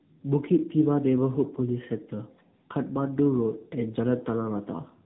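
Tandem speech coding runs from start to finish. The speech passed through two low-rate speech coders in a row, with a plain telephone link between them. The sound fits AMR-NB at around 8 and 10 kbit/s on either side of G.711 A-law. Each coder rebuilt speech from the previous one's flawed output, so the errors stacked. Nothing remains above 3.8 kHz. The result sounds muffled and rough, with a watery, warbling edge.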